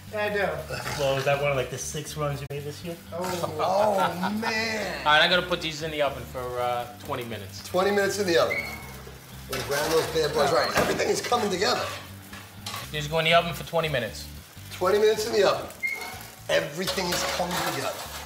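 At 2.46 s the sound fades into a short, soft-edged hole and returns by 2.51 s. This is AAC frame loss with muting: the decoder zeroed the spectrum of missing frames, about 43 ms, which fits two lost frames, and overlapping windows turned the edges into fades.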